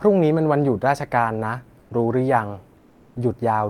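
At 1.79 to 1.89 s and 2.77 to 3.15 s, comfort noise in place of the background fills the pauses, likely from Opus DTX: the real room tone becomes steady, featureless hiss, about 2 dB quieter the first time. On a spectrogram those gaps show smooth, uniform texture.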